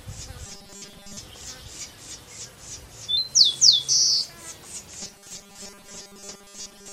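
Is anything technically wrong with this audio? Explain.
Yes. From 0.46 to 1.18 s, and again from 5.01 s to the end at 6.93 s, the sound collapses into a rigid, metallic buzz pitched at 200 Hz that only loosely tracks the underlying audio. This is robotic sound from repeated short buffers. The likely cause is audio arriving too late, so the player keeps looping the last 5 ms to fill the gap. That 5 ms repeat sets the 200 Hz tone, and most of the real material in these stretches is skipped.

From 3.17 to 4.87 s, a section plays at the wrong speed: it runs 1.15 times too fast, so everything sounds hurried and sits roughly two semitones higher. Pitch and tempo rise together and then drop back at the boundaries. This most likely comes from that passage being played back or resampled against a mismatched clock.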